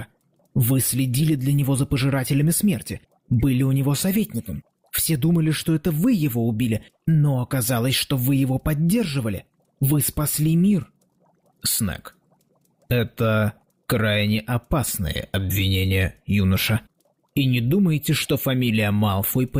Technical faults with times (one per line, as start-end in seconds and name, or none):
none